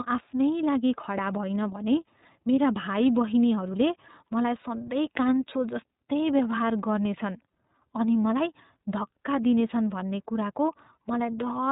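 Throughout, the speech carries the iLBC codec's narrowband sound. Nothing above 4 kHz survives, and plainly audible coding damage gives it a rough, slightly synthetic edge. Its character fits iLBC's 13.33 kbps mode with 30 ms frames. Unlike a simple low-pass filter, the roughness comes from coding the excitation, not just from the missing treble.

From 8.23 to 8.25 s there are lost iLBC frames. The decoder bridges the hole, which fits a single lost 30 ms frame, by repeating the last pitch cycle mixed with noise. The result is a brief held, buzzy vowel rather than a silent dropout. Because each frame decodes independently, the speech is clean again immediately afterwards.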